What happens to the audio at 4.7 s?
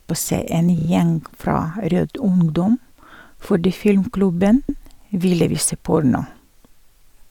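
Right after "fordi filmklubben", the sound stutters from 4.69 to 4.82 s. This is a repeated-frames fault. A 128 ms block of compressed audio was stored or sent twice, so the decoder plays the same stretch once more before moving on. That block length fits a run of four frames. The ear hears a brief skip-back, a fraction of a second heard again. The clip is 128 ms longer as a result.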